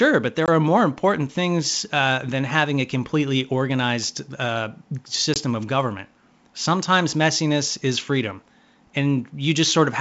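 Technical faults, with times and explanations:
0.46–0.49 s and 5.34–5.41 s, packet loss on an ADPCM call: each time about one packet, some 20 ms of speech, drops out and is filled with silence, leaving an abrupt, hard-edged gap. Because ADPCM sends only differences from a running prediction, the receiver's predictor and step size lose track of the sender's. When sound resumes it comes back slightly distorted, with brief roughness before the decoder realigns, while the G.722 wideband band stays clear up to about 7 kHz.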